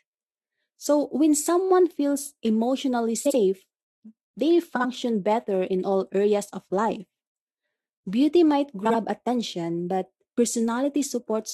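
Frames out of order: neighbouring runs of compressed audio were swapped, so each stretch of speech plays with its two halves exchanged, each half about 43 ms long, which fits two codec frames apiece. It happens at 3.25 to 3.36 s, after "when someone feels emotionally"; at 4.75 to 4.85 s, just before "better in all areas"; and at 8.85 to 8.94 s, before "attention but". Each sounds like a brief garbled flutter, and no time is lost.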